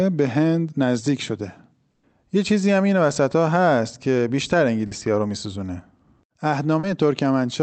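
A burst of packet loss hits this speech recording from 1.91 to 2.06 s. About 120 ms of the call arrived too late or not at all, and the receiver bridged the hole by extending the last sound while fading it down. That turns a voiced sound into a held buzz and anything else into a dying hiss. There is no silent stretch. When the real signal returns, 120 ms of the original has been skipped. Short concealed packet loss follows at 4.87 to 4.94 s and again at 6.79 to 6.86 s. Each time about 40 ms failed to reach the decoder, and the receiver filled the gap by continuing the previous sound, pitched if it was voiced and as shaped noise if not, before blending back in. Each gap is heard as a brief smear or wobble, and a short consonant can drop out. All of this passed through an Opus call path that limits the audio band to 8 kHz at a rate consistent with about 32 kbps.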